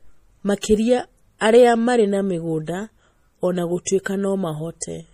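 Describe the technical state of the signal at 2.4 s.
At 2.4 s the speech carries plainly audible MP3 compression artefacts, likely from a low bitrate near 40 kbps, which persist throughout the clip. They sound watery and swirly, with nothing above 15.3 kHz.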